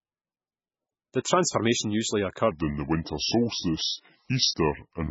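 From the start, the speech carries the smeared, swirly artefacts of heavy MP3 compression. This is likely low-bitrate audio saved at a high bitrate: the first pass, likely very low bitrate, stripped the detail, and the later high-bitrate encode cannot restore it.

At 2.51 s, right after "transformation usually", a section at the wrong speed begins and runs to the end. It plays at 0.764 times normal speed, likely from a clock mismatch, so the speech turns slow and drops about five semitones.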